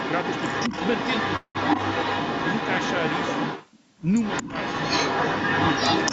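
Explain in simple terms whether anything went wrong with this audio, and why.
Two echo leaks run through the clip, from the start to 3.70 s and again from 4.22 s to the end. A copy of the speech comes back about 0.22 seconds late. In the first stretch it is about as loud as the original. In the second it is even louder. The likely cause is that the other person had their call on a loudspeaker. Their echo canceller failed to remove what their microphone picked up, so the sound was sent back.

A call audio freeze happens from 1.36 s to 1.57 s. The sound stalls for about 0.19 seconds. The last bit of sound is stretched into a fading buzz or hiss, with a short silence of about 0.08 seconds. Then the speech carries on from where it stopped, so nothing is lost, only delayed. This likely happened because data packets arrived late and the receiving side ran out of audio to play.

Speech suppressed in double talk shows up briefly from 4.43 s to 4.48 s. 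For about 0.05 seconds the talker's sound dips. This falls inside the second echo stretch. Both sides were likely sounding at once. The echo canceller could not tell the talker apart from the returning echo, so it turned both down for a moment.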